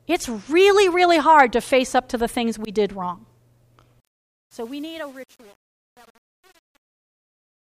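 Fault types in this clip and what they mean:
Truncation distortion on a fade: from 4.25 s to the end at 7.6 s, the speech fade-out turns gritty, because the fade rounds the level to too few bits, fitting an 8-bit stage, without dither.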